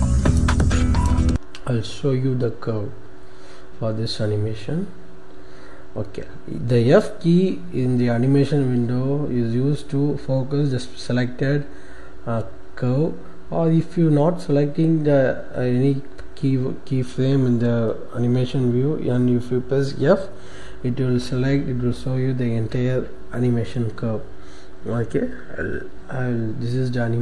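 No technical faults can be heard anywhere in it.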